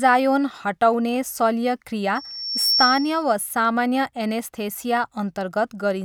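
From 2.15 to 3.24 s, loudspeaker feedback squeal. The microphone hears its own loudspeaker. A 5.5 kHz tone swells quickly above the speech.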